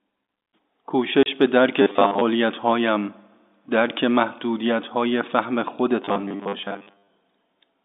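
Packet loss filled with silence occurs from 1.23 to 1.26 s: a single 30 ms hole where the receiver had nothing to play and inserted silence instead. The gap matches the length of one lost packet. Because the audio stops and restarts abruptly rather than fading, the speech is briefly chopped. The telephone-band character of the line, limited to roughly 200 Hz to 3.7 kHz, is audible on either side.

Robotic sound from repeated short buffers affects 1.82 to 2.21 s and again 6.02 to 7.09 s. The speech turns into a stiff, metallic buzz pitched at 100 Hz, which fits a 10 ms block being replayed over and over. The likely cause is new audio arriving too slowly, so the playback side loops its last short buffer to fill the time and skips most of the real signal. The buzz still loosely tracks the speech's rhythm and loudness.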